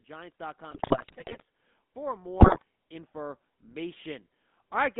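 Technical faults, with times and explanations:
Throughout: GSM full-rate codec. The sound is buzzy and gravelly, with the band held to about 200 Hz to 3.6 kHz. This fits the 13 kbps full-rate GSM coder. It rebuilds the voice from a vocal-tract filter fed by sparse, regularly spaced pulses, so fine detail turns rough.
0.70–1.42 s and 2.40–2.63 s: GSM bit errors. The speech breaks into squawks, pops and gargling. Corrupted bits on a weak radio link reached the decoder and spoiled its filter, pitch and gain values. Frames came out with a bent spectrum or jumping level. The second burst is harsher.
1.94–4.95 s: automatic gain rising. The level swells gradually by about 5 dB over roughly three seconds. Voice and background rise together. The automatic gain control judged the input too quiet and slowly raised its gain, lifting everything it passed.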